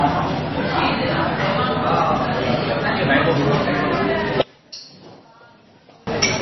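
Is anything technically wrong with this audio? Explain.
Yes, two faults are audible.

Throughout, the sound is heavily damaged by what is likely MP3 compression at a very low bitrate, around 23 kbps. Nothing is left above 6 kHz, and weak spectral components flicker between frames, giving a watery, swirling texture with smeared attacks. That flicker is what separates it from a simple low-pass filter, which would dull the top without any swirl.

From 4.42 to 6.07 s, the level falls by about 23 dB, most likely because one channel is inverted. With reversed polarity, the content shared by both channels cancels when they are combined, leaving only their faint difference. Unlike a dropout, it never falls to true silence.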